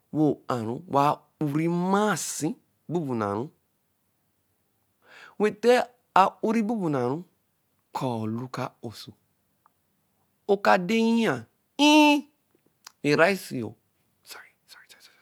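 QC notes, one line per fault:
Nothing stood out on listening to this speech recording.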